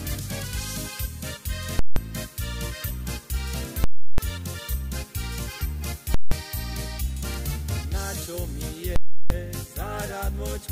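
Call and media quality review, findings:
Invalid numbers at full scale: hard, very loud pop, dead silence, second pop, at 1.79–1.96 s, 3.84–4.18 s, 6.14–6.32 s and 8.96–9.30 s. Gaps last 0.17 s or 0.34 s, which fits whole 8192- and 16384-sample processing blocks. Probable component: a DSP stage whose calculation blew up into infinite or invalid values that were clamped to maximum positive or negative level, pinning the output at full scale for the block.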